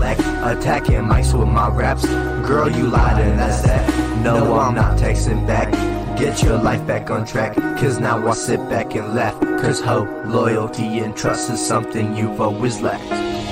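From 2.95 to 4.59 s, the sound is shadowed by a second, dry copy trailing about a tenth of a second behind and roughly 5 dB quieter, cutting in and out abruptly. This doubled audio track likely comes from the same signal being captured twice through paths with different delays.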